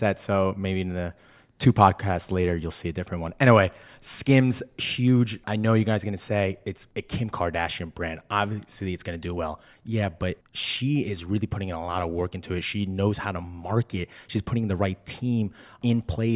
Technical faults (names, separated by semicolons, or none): none